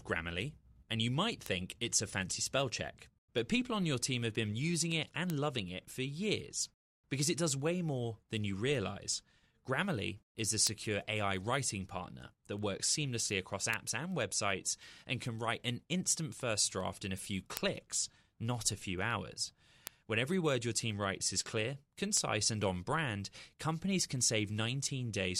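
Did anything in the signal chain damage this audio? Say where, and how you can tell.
Yes. Word clock ticks run through the speech from 0.31 s to 25.24 s, about seventy sharp clicks of uneven strength at a steady rate of roughly one every 0.4 s. The fault is at the digital interface. The receiving device runs on its own clock, unlocked to the sender's, with a mismatch of around 50 ppm. Each time the clocks slip, one sample is dropped or repeated. On a waveform each tick is a single-sample step. A spectrogram shows evenly spaced thin vertical broadband lines.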